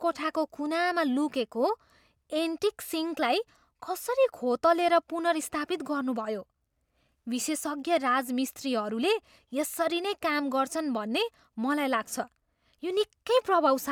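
Nothing goes wrong technically anywhere in this speech recording, so there's no fault to point to.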